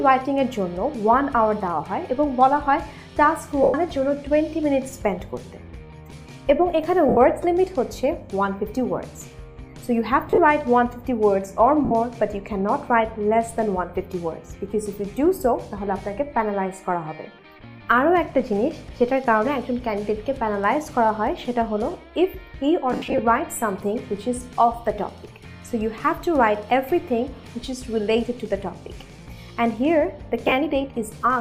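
Brief noisy smears replace the sound at 3.63, 7.09, 10.28, 11.85, 22.93 and 30.44 s. These are lost LE Audio frames, which the LC3 decoder concealed by repeating the last spectrum with random signs.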